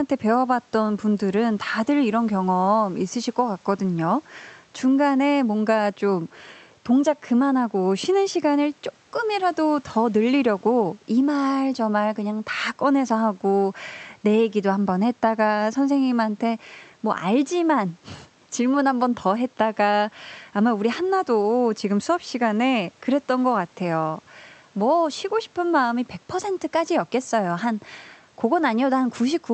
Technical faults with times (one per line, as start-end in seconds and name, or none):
none